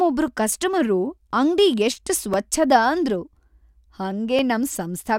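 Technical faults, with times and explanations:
0.28 to 4.39 s, periodic USB or driver dropouts: about five short clicks spaced 1.02 s apart cut into the speech. Each time, something likely stalled the USB link or audio driver, and a couple of milliseconds of samples were replaced by silence. The abrupt drop to zero and back produces a tick. On the waveform each event is a tiny flat gap. On the spectrogram it is a thin vertical broadband line at the same regular spacing.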